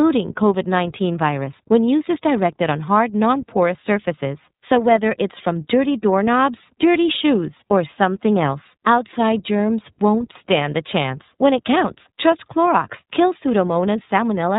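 iLBC codec damage runs throughout this speech: band-limited below 4 kHz, rough and synthetic in tone, consistent with 30 ms frames coded independently at roughly 13 kbps.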